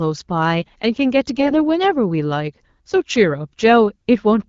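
From 1.35 to 1.56 s the speech turns hoarse, scratchy and gargly while pitch and level hold roughly steady. These are AMR bit errors: around one bit in twenty of the weakly protected bits in the AMR-WB stream arrives flipped. The excitation pulses are misplaced and the fine gain and spectral values are corrupted across a span that fits about eleven 20 ms frames.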